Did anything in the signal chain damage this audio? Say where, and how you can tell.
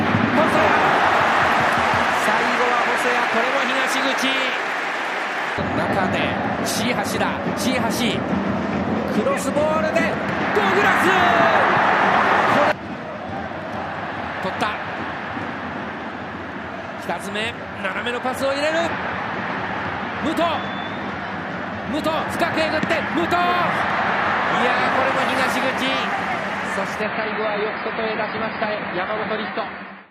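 Yes. An adaptive stream at a lower bitrate, at the network and codec stage, takes over from 27.02 s to the end at 30.11 s. The quality changes abruptly with no gap in the sound, and from that point nothing is left above 5 kHz while coding artefacts rise. When the connection slowed, the player switched to a leaner rendition of the same AAC stream, and the loss points to a drop from around 96 kbit/s to around 16 kbit/s.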